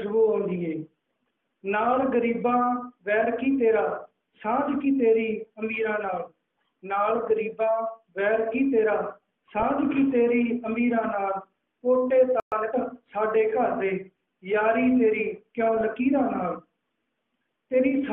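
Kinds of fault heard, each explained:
DAB burbling: Bit errors slipping past error correction make single sub-bands jump for a frame, giving short blips of noise at 9.60 and 15.77 s, seen as blotchy band-limited patches.
Playback stall: The sound stops for about 120 ms at 12.40 s, likely from the player running out of data, leaving a flat, silent gap in the waveform.
Time-compressed catch-up: From 12.52 to 12.76 s the audio runs hurried at 1.5 times speed, normal pitch; spectrogram events crowd together while harmonic spacing stays unchanged.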